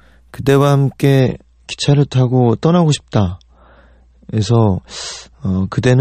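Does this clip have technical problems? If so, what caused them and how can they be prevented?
Yes. From 1.20 s to the end of the speech, the sound suddenly turns duller and more smeared, with nothing above about 8.4 kHz, but no gap. This is an adaptive stream at a lower bitrate: the player switched to a leaner version mid-play, and the change points to MP3 dropping from around 128 kbit/s to around 33 kbit/s. Preventing it takes a steadier connection, a larger playback buffer, or pinning the stream to its highest-quality rendition.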